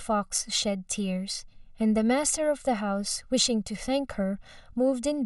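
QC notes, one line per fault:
Throughout, channel delay (comb filtering): one side lags by roughly a millisecond and a half, so the mono sum notches out from around 300 Hz up, leaving the speech hollow and phasey.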